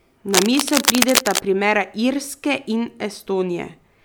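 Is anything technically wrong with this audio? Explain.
Yes. From 0.33 to 1.40 s, cable scratch noise sits over the speech: dense, uneven bursts of scratching and rustling at roughly the same level as the speech itself. The likely cause is a worn cable or connector being moved, its contact resistance fluctuating rapidly and injecting noise into the signal.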